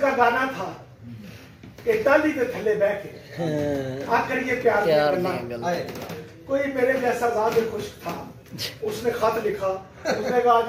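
No technical faults are audible.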